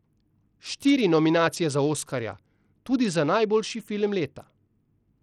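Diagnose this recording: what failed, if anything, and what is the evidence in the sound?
The codec stage likely failed, with Bluetooth SBC compression starving the upper sub-bands. Throughout the speech, the treble flickers under gritty noise, which fits a bitrate near 80 kbps.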